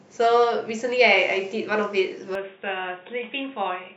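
An input switched to a poorer device from 2.35 s to the end: the speech abruptly turns dull and boxy, with nothing above 3.8 kHz, faint new background noise, and a somewhat lower level, likely because recording moved to another microphone or headset, with no gap.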